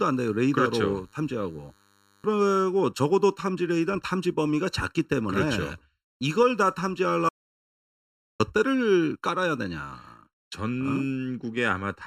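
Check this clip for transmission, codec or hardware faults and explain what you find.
Three faults are present in this speech clip.

Channel delay (comb filtering) runs throughout. One channel lags by under a millisecond, so the mono sum cancels at evenly spaced notches from around 700 Hz, making the speech hollow and phasey.

A DECT cordless phone buzz sits under the opening, from 0.00 to 2.47 s. Radio bursts every 10 ms are rectified into a thin, steady 100 Hz buzz, faint and well below the speech.

An audio dropout to silence runs from 7.29 to 8.40 s, lasting 1.1 s. The sound stops dead into silence with no room tone, then resumes. The likely cause is a briefly lost input while recording continued.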